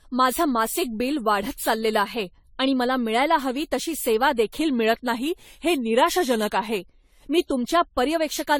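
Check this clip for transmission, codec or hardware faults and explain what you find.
Two faults are present in this speech clip: one runs through the whole recording and one is a timed event.

Generation loss affects the entire clip. The audio sounds swirly, smeared and hollow, and consonant attacks are blurred, all beyond what a single 64 kbit/s AAC-LC encode would produce. The likely cause is roughly ten rounds of decoding and re-encoding. Each pass requantises on a shifted frame grid, so noise and spectral gaps accumulate. Content stops at 19.9 kHz.

A drift correction step runs from 4.61 s to 6.80 s. During this span, playback slows by 5.65% and pitch falls by 101 cents, just over a semitone, so the speech sounds lower and dragged. At 6.80 s, it snaps back to normal speed and pitch. This is likely clock-matching software abruptly cutting the playback rate to refill its buffer, then restoring it once the buffer recovered.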